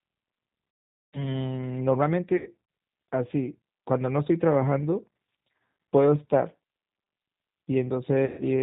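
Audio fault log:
throughout: G.729 codec. The speech sounds rough, slightly synthetic and dull, with nothing above 4 kHz, which fits G.729A at 8 kbit/s. Each 10 ms frame is rebuilt from a vocal tract filter, a pitch predictor and a handful of pulses, so fine detail is lost.
1.02–1.28 s, 2.37–2.48 s, 8.26–8.43 s: VoIP packet loss concealed by the speech codec. The speech smears into a buzzy tone or coloured noise that fades, and stays weak just afterwards. Packets went missing, and the decoder extended its last pitch and filter at falling gain.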